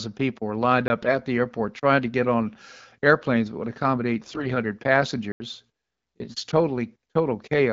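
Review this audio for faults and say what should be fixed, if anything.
Block of digital silence: the output drops to silence for 20 ms at 0.88 s, just after "people were lined", and for 80 ms from 5.32 to 5.40 s. The buffer was likely not filled in time. The abrupt cut and return give a short hole at 0.88 s and an audible hole at 5.32 s. On a waveform each appears as a flat line with hard edges. A spectrogram shows a blank vertical strip. Prevent it by enlarging the output buffer or giving the audio thread priority so it never underruns.

AMR bit errors: hoarse, gargly bursts occur from 1.02 to 1.10 s, just before "the airport trying to"; from 4.23 to 4.47 s, just after "airplanes that would accommodate"; and from 6.22 to 6.44 s. Flipped bits, on the order of several percent to around a tenth of the bits, slipped past the checksum. They misplaced the excitation pulses and skewed the pitch, gain and spectral detail. 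Level and pitch roughly hold, so the waveform envelope looks close to intact. The spectrogram shows smeared, noisy harmonics and blurred formants in those spans. The damage sits on top of the light coding texture of the 12.65 kbit/s AMR-WB stream. Prevent it by improving link quality or adding error concealment that mutes or repeats frames with suspect low-priority bits.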